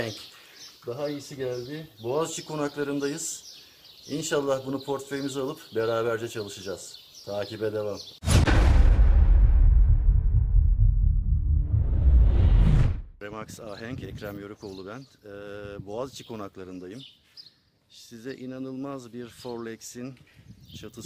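No technical faults can be heard anywhere in the signal.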